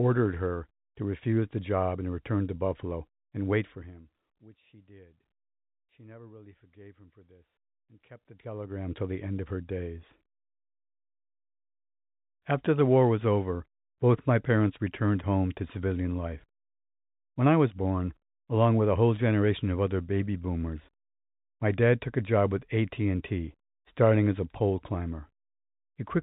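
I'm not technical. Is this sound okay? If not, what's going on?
Yes, this recording sounds fine, with nothing going wrong in it that you'd need to worry about.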